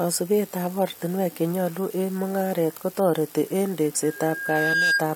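At 4.03 s, after "eng mungaret kotareti eng", loudspeaker feedback squeal begins. A 1.6 kHz tone swells over roughly 0.7 s, ending about 5 dB above the speech at 5.07 s.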